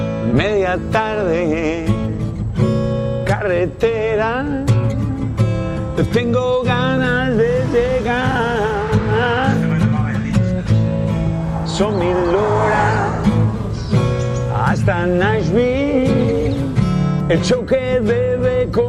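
Nothing is technically wrong with the audio in this clip.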